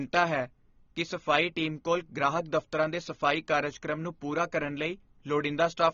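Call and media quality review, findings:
AAC compression, throughout the clip. Speech dull and smeared, band-limited, with audible warbling on sustained vowels and fizzy sibilants. Spectrogram: hard ceiling at 7 kHz, nothing above; patchy holes and blotchy, time-smeared energy in the upper bands. Likely cause: AAC-LC encode at a low bitrate, consistent with about 24 kbps, coarse quantisation starving high frequencies.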